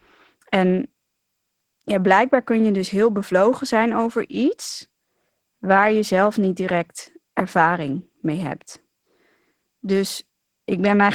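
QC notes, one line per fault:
Throughout: Opus voice compression. At a rate that sounds near 16 kbps, the coarse coding leaves the speech plainly hoarse and a bit robotic. Thin hybrid detail up top.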